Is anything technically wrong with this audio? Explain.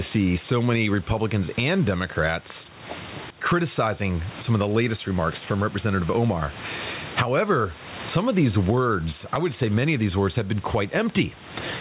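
Yes. Gain pumping runs through the whole speech clip. The level swings by around 20 dB. The likely cause is input gain set far too high, with a fast limiter or compressor clamping down on each loud syllable and releasing in the gaps. On a waveform the envelope looks flattened, with peaks squashed to similar heights. The background is room noise sitting about 29 dB below the speech, and the spectrum stops at 4 kHz, which fits the G.711 A-law call codec.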